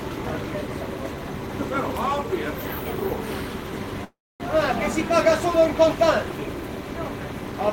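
From 4.04 to 4.41 s a call audio freeze stretches the last sound into a fading buzz, then 250 ms of silence, likely from delayed packets emptying the jitter buffer. Sound resumes 355 ms late, nothing lost. A spectrogram shows smeared bands tapering to blank.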